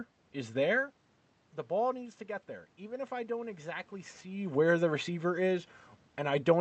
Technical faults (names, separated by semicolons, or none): automatic gain rising